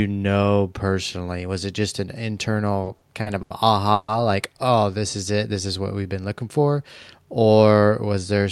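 From 2.83 to 3.53 s, packets arriving slower than playback kept draining the jitter buffer, causing repeated stalls: four stutters, the longest 80 ms, nothing lost. At 3.94 s, packets were likely held up in transit, producing a call audio freeze: the last sound hangs for 140 ms before the speech resumes intact.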